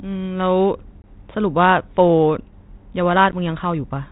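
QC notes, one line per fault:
1.02–1.05 s and 3.32–3.34 s, packet loss on an ADPCM call: about 20 ms, then 10 ms, drops to hard-edged silence, a flat gap in the waveform and a blank vertical stripe below the 4 kHz band ceiling of the 32 kbit/s G.726 stream. The decoder's predictor and step size lose sync with the sender, so the speech resumes slightly distorted before settling.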